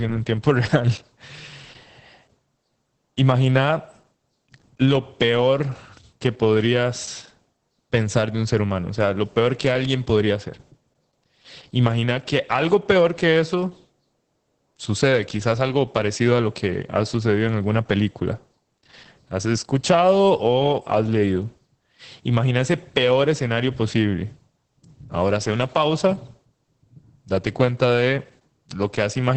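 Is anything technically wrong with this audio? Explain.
Yes. Opus voice compression affects the whole speech clip. The sound points to Opus in its SILK linear-prediction mode at a low rate, which fits about 10 kbps. To save bits the coder drops to wideband, so nothing remains above about 8.5 kHz, and it codes the excitation signal coarsely. The damage is heavy: the speech sounds muffled and dull at the top, with a hoarse, slightly robotic roughness.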